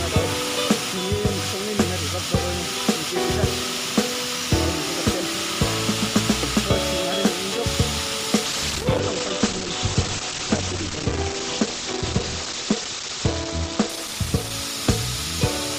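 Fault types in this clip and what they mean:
call bitrate drop: From 8.45 s to the end the encoder gets starved of bits, so everything above 8 kHz vanishes and the sound turns dull and a bit watery, consistent with a fall from about 64 kbps to 13 kbps that never recovers.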